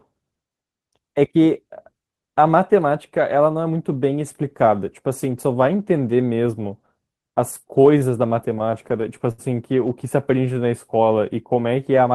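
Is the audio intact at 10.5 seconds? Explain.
No. From 10.36 to 10.69 s a jitter buffer slow-down occurs: the receiver, short of buffered audio, repeated single pitch periods to add about 39 ms. The speech plays at roughly 90% speed with its pitch unchanged, sounding briefly drawn out.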